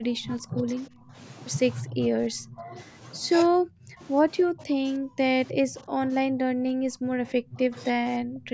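Speech suppressed in double talk appears four times: from 0.0 to 1.16 s, 1.82 to 2.75 s, 3.51 to 3.99 s, and 4.43 to 8.53 s. Here the speech sinks by roughly 15, 25, 30 and 25 dB, dipping and breaking into pieces for about three seconds of the final stretch. The likely cause is an echo canceller that heard both ends talking at once, could not separate this talker from loudspeaker echo, and attenuated everything.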